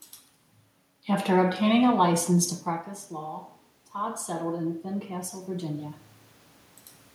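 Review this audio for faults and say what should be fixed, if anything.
Automatic gain rising runs from 3.16 to 6.05 s, just after "a license to practice." Around 2.5 s the talker moves back and the level at the microphone drops by about 12 dB. The automatic gain control answers by adding about 6 dB gradually over almost three seconds, so the voice and the room noise swell together. On a waveform the envelope ramps steadily upward across that span. On a spectrogram the background floor brightens along with the speech. To prevent it, slow or cap the gain control's rise, or keep the talker at a steady distance from the microphone.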